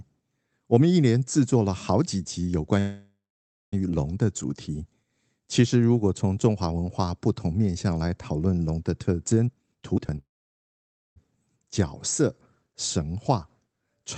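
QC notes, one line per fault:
2.79–3.74 s, call audio freeze: The speech stops for 0.93 s and resumes exactly where it left off. The last sound carries on as a buzz that fades out, and about 0.57 s of the gap is silent. Nothing is lost. The pause simply pushes everything after it about 0.93 s later. This is likely a jitter buffer running empty while packets were held up on the network.
9.47–10.18 s, jitter buffer speed-up: The speech suddenly sounds hurried, running at about 166% speed while the pitch stays the same. Roughly half a second of audio is taken out in tiny slices, each one or a few pitch periods long, cut one after another. The receiver does this to drain a buffer holding more than its target. Voiced sounds get shorter without turning chipmunk-like.
10.18–11.18 s, call audio freeze: Right after the speed-up, the speech halts again, this time for 0.98 s. Only a brief tail of the last sound is carried on, and about 0.91 s of the gap is plain silence. 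The audio then picks up where it stopped, so nothing is missing but the delay grows by 0.98 s. The likely cause is again late packets leaving the jitter buffer empty.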